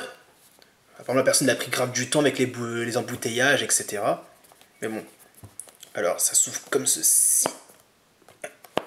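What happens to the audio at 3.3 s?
Nothing goes wrong at 3.3 s: the audio plays through that moment intact, with no dropout, click, distortion or other fault.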